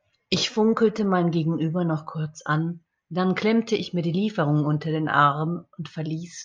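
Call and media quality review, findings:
Nothing to flag on this speech recording; no faults turned up anywhere in it.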